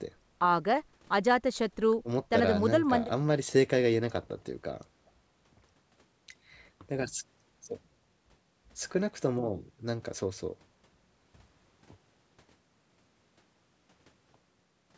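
Speech recorded over a call, with no technical faults to report. The audio stops at 8 kHz, which fits the call's microphone processing and a wideband codec such as G.722 on the call path.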